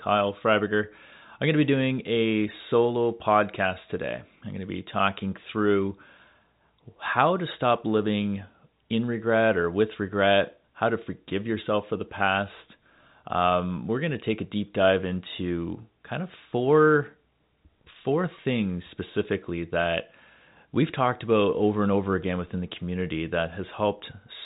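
No faults are audible anywhere in this speech.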